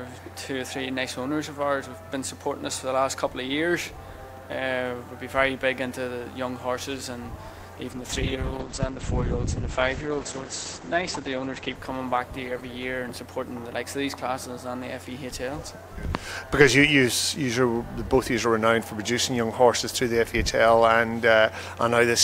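At 7.93 s there's a call bitrate drop that lasts until about 15.81 s. The bandwidth estimate collapsed and the encoder got squeezed hard, so the sound goes coarse and watery and the top end gets chopped, with the audio band shrinking from 20 kHz to around 8 kHz. It bottoms out for roughly three seconds, with a roughness that fits something near 10 kbps, before recovering toward what sounds like 96 kbps.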